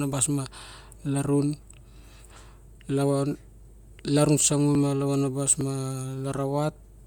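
Bluetooth LC3 compression, throughout: the speech has a plainly grainy, breathy edge, likely from transform coding at about 48 kbps that fills the upper spectrum with noise.

Dropped buffer (overrun) at 4.75 s, just before "ma lavanabas", and at 5.61 s, just after it: at each the sound jumps ahead by a few tens of milliseconds, likely because unread samples were overwritten.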